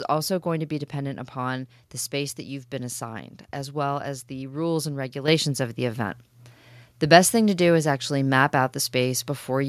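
At 5.28 s the microphone volume is stepped up: the input gain on the capture device is raised in a single jump of about 7 dB, apparently by automatic level control reacting to a quiet microphone. The speech and the background noise get louder together at that instant, with no fade. On a waveform the envelope widens abruptly at 5.28 s. On a spectrogram every frequency band, including the noise floor between phrases, brightens at once.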